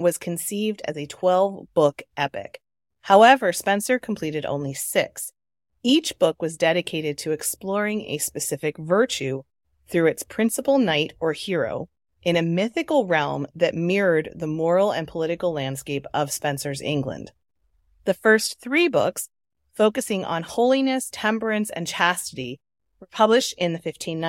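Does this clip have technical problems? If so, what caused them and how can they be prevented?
No, the speech signal stays steady and intact throughout, with no audible technical faults, so there is nothing here that needs preventing.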